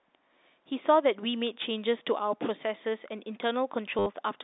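A short robotic stutter breaks into this speech clip from 3.99 to 4.06 s, with a buzz near 100 Hz for about 70 ms before the sound resumes. It is packet loss with the last packet repeated: the receiver kept replaying the final packet it had until fresh ones arrived. The buzz rate fits 10 ms packets. The telephone-band G.711 coding comes through as a narrow line sound.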